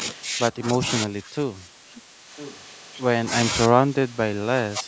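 From 0.52 to 0.82 s the speech dips slightly, by about 5 dB, then from 1.05 to 2.31 s it sinks much further, by about 20 dB, and comes and goes. This is speech suppressed in double talk, likely the echo canceller ducking the talker while the far side spoke too. Inside that stretch, at 1.95 to 2.02 s, a faint scrap of the voice returns about 1.0 s late, at about 25 dB below the speech. It is echo leak, likely loudspeaker pickup the far end's canceller failed to remove. The same delayed copy returns more clearly from 2.36 to 2.61 s, at about 15 dB down. From 3.68 s to the end at 4.87 s the speech is pulled down again by about 20 dB. This is once more likely double-talk suppression.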